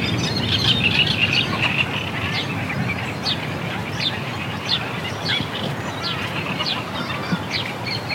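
No technical faults can be heard in this recording of sounds.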